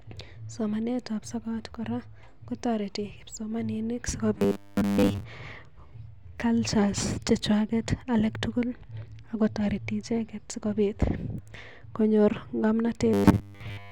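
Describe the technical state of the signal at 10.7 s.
Nothing at 10.7 s is technically at fault; the speech signal is intact at that moment.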